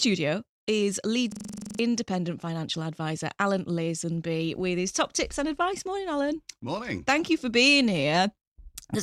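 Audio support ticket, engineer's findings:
System hang loop, 1.32 to 1.79 s. Symptom: one 42.67 ms fragment repeats exactly, 11 times, giving a rough machine-gun stutter at 23.4 Hz. Probable component: host or audio driver stalled while the interface kept replaying its ring buffer. Loop length fits a 2048-sample buffer. About half a second of real audio lost.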